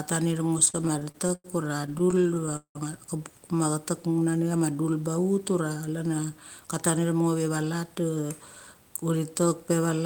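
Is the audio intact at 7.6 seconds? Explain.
No. From 6.59 to 8.75 s a jitter buffer speed-up is under way: the receiver drains excess buffered audio by repeatedly cutting out pitch-period-length pieces, about 0.3 s in total. The speech plays roughly 12% faster at unchanged pitch and sounds hurried.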